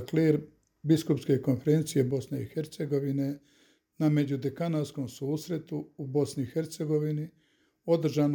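At 2.11 s the level falls abruptly by about 6 dB and stays down to the end. That drop points to one channel dropping out, likely losing one stereo side, so that after the mono sum only half the shared signal remains.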